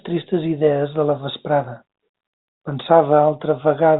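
Nothing stood out on listening to this speech clip.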